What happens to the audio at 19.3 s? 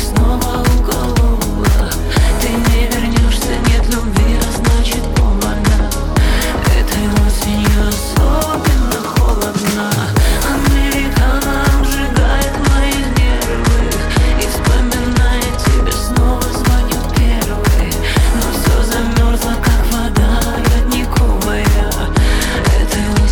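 Nothing goes wrong at 19.3 s; the audio plays through that moment intact, with no dropout, click, distortion or other fault.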